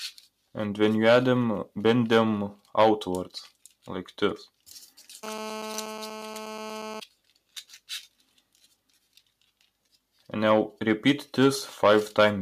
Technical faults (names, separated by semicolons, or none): sound cut by the noise suppressor